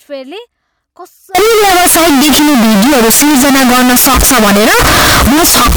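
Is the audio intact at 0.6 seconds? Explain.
Yes, the speech at 0.6 seconds is intact, with no dropout, click, distortion or other fault at that point.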